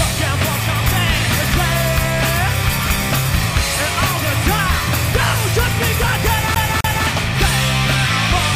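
From 6.55 to 7.07 s the audio sticks like a CD stuck on one turn: a 0.26 s slice plays twice, each jump marked by a brief mute. A waveform shows two identical blocks separated by tiny gaps.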